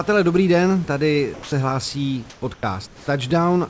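At 1.34 to 1.52 s, just after "dobrý den tady", the sound is dropped by the voice detector: about 140 ms of speech is lost and replaced for 180 ms by comfort noise. The likely cause is that the sender's detector treated the speech as background, stopped transmitting, and the receiver filled the pause until transmission resumed.

Comfort noise in place of the background follows at 2.30 to 2.42 s, 2.54 to 2.63 s and 2.87 to 3.08 s. In each gap the room noise, roughly 26 to 27 dB below the loud passages, is swapped for featureless synthetic noise. It sits about 1 dB, 9 dB and 3 dB lower respectively. This is likely discontinuous transmission during pauses. The band limit of the G.722 call path, with nothing above 8 kHz, applies throughout.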